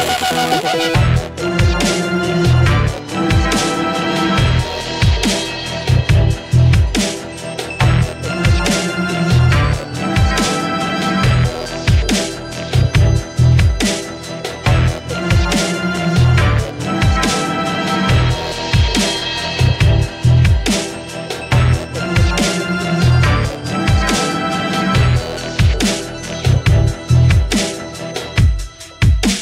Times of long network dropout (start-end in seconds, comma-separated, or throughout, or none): none